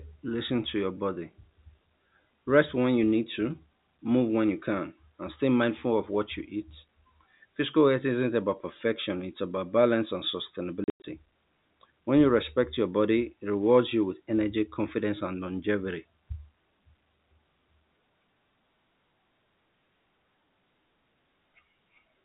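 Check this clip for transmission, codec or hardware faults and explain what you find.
One transmission fault stands out: packet loss filled with silence between 10.84 and 11.04 s, in speech carried over G.711 telephone coding, which itself adds at most faint damage.

Over those 200 ms, about 160 ms of audio went missing in separate gaps, the longest 100 ms, which fits a handful of lost 20 ms packets. The receiver inserted silence, so the speech breaks apart with hard edges. A waveform shows flat near-silent blocks with abrupt vertical cut-offs, and a spectrogram shows empty vertical bands.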